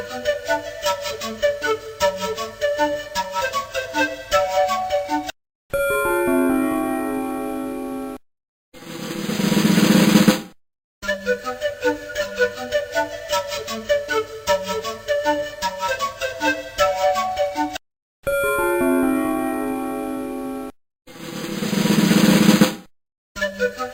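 Nothing stood out on listening to this recording.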